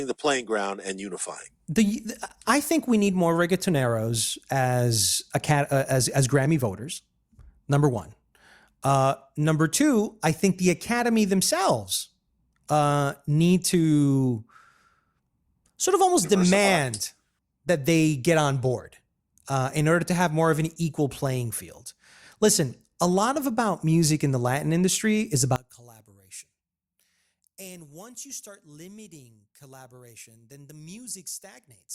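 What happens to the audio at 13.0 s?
Nothing goes wrong at 13.0 s: the speech carries on intact through that moment, with no dropout, click, distortion or other audible fault.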